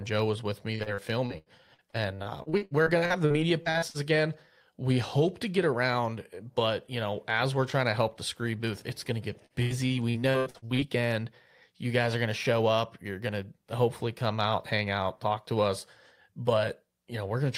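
Speech, hit twice by repeated packet loss (robotic sound). Packets went missing in quick succession from 0.75 to 3.97 s, just after "was with me", and again from 9.46 to 10.81 s, after "booth it's going to". Each hole was papered over by stretching the last sound, so the stretches turn choppy, with pieces missing. Dozens of short dropouts, none longer than about 80 ms, leave roughly a quarter and a third of each stretch synthetic.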